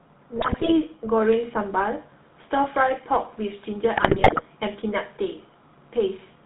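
From start to finish the speech carries the GSM full-rate codec's signature. Everything above 4 kHz is missing, and the voice has a buzzy, gravelly texture from the pulse-driven vocal-tract model, consistent with a 13 kbps full-rate stream.

GSM bit errors break in from 0.36 to 0.73 s and again from 3.96 to 4.42 s. Corrupted filter, pitch and gain values reach the decoder, so frames come out spectrally bent or overdriven. The result is bursts of squawks, pops and gargling, heavier in the second stretch.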